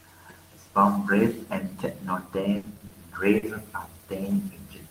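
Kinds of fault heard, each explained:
Repeated packet loss (robotic sound): Right after "song's riff and techno", from about 2.19 to 2.94 s, the stream keeps dropping out. Four gaps get papered over by extending the previous sound, about 140 ms of fill in total. About 120 ms is simply gone, the longest hole 80 ms, so it turns choppy with pieces missing.
Short stall from a late packet: Around 3.39 to 3.46 s a packet shows up late and the buffer runs dry. The last sound gets stretched for about 40 ms until it arrives, then playback carries on with nothing lost, just a brief held moment with a slight buzz or dip.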